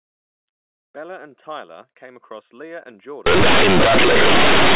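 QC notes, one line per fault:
3.26 to 4.76 s, companded audio read as linear: the mu-law bytes stop being expanded and are played as plain 8-bit samples instead. The logarithmic codes land on a linear scale, so every sign change throws the output across about half its range. Quiet passages come out as loud as peaks, and the waveform is badly bent. The speech turns into very loud, buzzy distortion, with heavy noise filling the pauses, until the clip ends. Before this, the telephone-band sound stays clean.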